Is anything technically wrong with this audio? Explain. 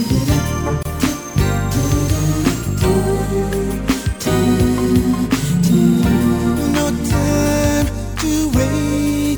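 Yes. A gap at a join of encoded pieces sits at 0.83 to 0.85 s. The audio was evidently encoded in separate segments and spliced without trimming, so the encoder's start-up delay and the padding in the previous segment's final frame both survive at the seam. The result is a dropout of about 25 ms cutting into continuous sound, with its edges softened by the codec, after which the sound resumes exactly where it broke off.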